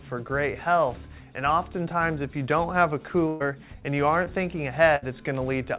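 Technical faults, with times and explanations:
3.28–3.42 s and 4.96–5.04 s, burst of packet loss: packets arrived too late or not at all, so the receiver stretched the last sound into gaps of 121 ms and 62 ms, fading it out. The audio then resumes about 120 ms and 60 ms further on, with that stretch missing.
4.24–4.28 s, short concealed packet loss: about 20 ms of audio never reached the G.711 A-law decoder in time. The receiver filled 16 ms by continuing the preceding sound and blended back in, which leaves a brief smear in the band-limited, sub-4 kHz signal.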